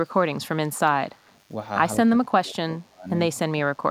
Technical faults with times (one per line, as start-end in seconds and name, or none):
0.00-3.91 DECT cordless phone buzz
1.27-1.31 echo leak
2.17-3.08 speech suppressed in double talk
3.34-3.82 speech suppressed in double talk